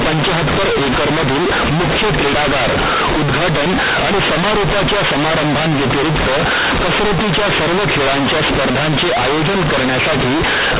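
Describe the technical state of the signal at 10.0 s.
At 10.0 s, as across the whole clip, A-law companded audio is read as linear 8-bit, so quiet speech swings as wide as loud, giving harsh, loud buzz, unlike clipping's flattened peaks.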